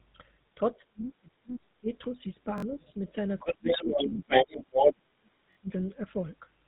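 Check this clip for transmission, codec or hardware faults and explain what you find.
Four kinds of fault are audible: codec coloration throughout, and a cluster of echo-control and playback problems between about 0.55 and 5.69 s.

The whole clip has a buzzy, gravelly roughness with no content above 3.8 kHz. This is GSM full-rate codec damage, consistent with the 13 kbit/s GSM full-rate coder. That coder rebuilds the vocal tract from a sparse, pulse-driven excitation, which produces the grainy texture.

From 0.55 to 1.91 s, 3.41 to 4.74 s and 4.91 to 5.69 s, the talker dips and breaks up. The drops reach around 35, 20 and 40 dB. This is likely speech suppressed in double talk: an echo canceller, unable to separate both parties, turned everything down.

A faint second voice surfaces at 1.50 to 1.55 s, roughly 35 dB under the talker. From 3.45 to 4.93 s it becomes louder than the talker by around 10 dB. 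This is likely the other side's voice leaking through, where loudspeaker sound was left uncancelled in the microphone.

Short stutters with hard joins occur at 2.58 to 2.62 s and 5.53 to 5.57 s. Each is a repeated buffer: a piece about 21 ms long is replayed twice more when fresh audio arrives late, which fits a 1024-sample buffer. Roughly 40 ms of real audio is lost at each stutter.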